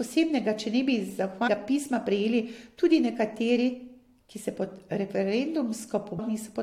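Damaged data in the compressed stream twice leaves the decoder misreading frames and hunting for the next valid header. Each time this gives a brief glitch: at 1.47 s, between "če ne bi" and "pisma prejeli tudi nekateri", and again at 6.18 s.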